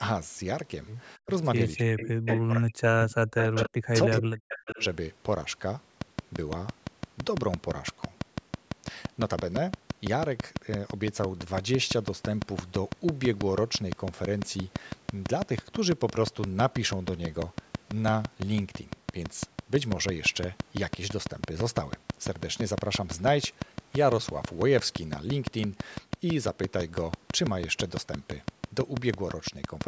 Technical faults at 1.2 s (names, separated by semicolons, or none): speech suppressed in double talk